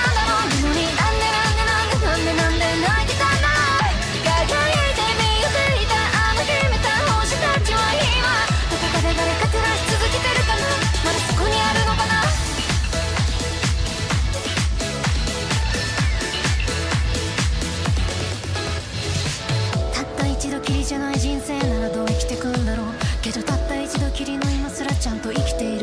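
Nothing here trips up the ear at any point, so there's no technical fault to pin to a moment in this one.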